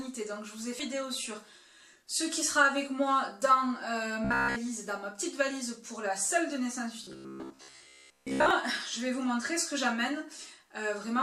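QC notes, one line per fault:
0.79–0.81 s, skip ahead: The audio jumps forward abruptly with no gap filled in. Roughly 0.7 s of sound is missing. Later audio was already queued, so the dropped stretch was discarded and the two sides were joined almost directly.
4.25–4.56 s and 7.04–8.51 s, robotic sound from repeated short buffers: The sound becomes a rigid metallic buzz at 66.8 Hz. The first stretch is entirely repeats, the second mostly. The likely cause is late audio, with a buffer of about 15 ms looped to fill time.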